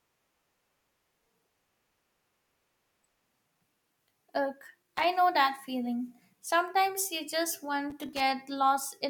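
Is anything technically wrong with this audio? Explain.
Yes, loose connector crackle occurs from 4.82 to 5.04 s and from 7.90 to 8.20 s, where a worn contact intermittently breaks the speech signal, producing irregular scratchy bursts. On a waveform these show as chopped gaps and spikes; a spectrogram shows scattered broadband vertical streaks.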